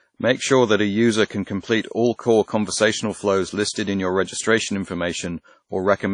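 From start to finish the speech carries low-bitrate audio saved at a high bitrate. The file is a fat MP3, but the sound has that thin, swirly, smeared quality of a much leaner encode, with consonants a bit watery. That points to something like a 32 kbit/s WMA pass that was likely re-encoded at around 192 kbit/s. The extra bits just faithfully preserve damage the first codec already did.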